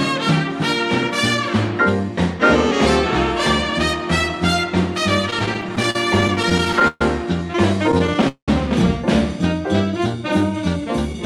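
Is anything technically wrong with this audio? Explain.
Yes. Repeated stalls (stutter) occur from 5.30 to 7.02 s and again from 7.84 to 8.49 s. Packets reached the receiver late, so its jitter buffer kept running dry, and it stretched the last sound to cover each wait. The first stretch has many brief hitches totalling 343 ms, the longest 129 ms, about a fifth of that span. The second is denser, with waits up to 192 ms, the longest ones fading. Unlike dropouts, nothing is lost. The audio drags and stammers rather than skipping.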